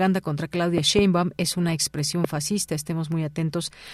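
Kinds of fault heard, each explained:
Loud pop: Two sharp pops land between 0.78 and 1.01 s, and a single pop at 2.24 to 2.27 s. Each peaks roughly 15 dB above the speech, which carries on underneath. The likely cause is a sudden voltage pulse entering the signal chain.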